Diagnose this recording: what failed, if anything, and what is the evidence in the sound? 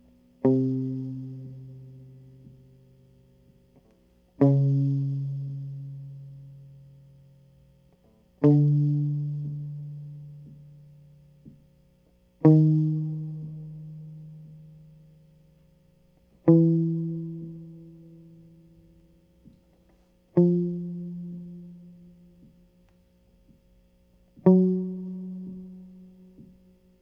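Nothing in the music points to a failure at any stage, from capture through conversion and transport to playback.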